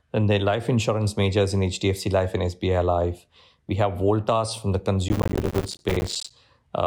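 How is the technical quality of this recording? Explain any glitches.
The recording has one glitch. Processor overload crackle runs from 5.09 to 6.31 s, right after "voltas from the". The processor missed many buffer deadlines again and again. Each miss left a brief, hard-edged silent gap, around 5 ms. Together they make gritty crackle across the speech.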